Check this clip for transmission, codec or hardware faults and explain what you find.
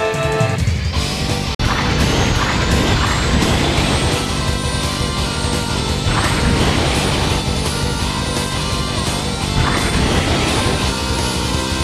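One fault stands out, a short gap in the audio that is likely a Bluetooth dropout.

Bluetooth dropout, 1.55 to 1.60 s: the audio cuts to silence for about 46 ms and then resumes further along, as though it had kept playing through the gap. This is the sign of audio packets failing to reach the headphones in time and being discarded, with output silent until valid packets arrived. The length of the hole fits roughly two lost packets.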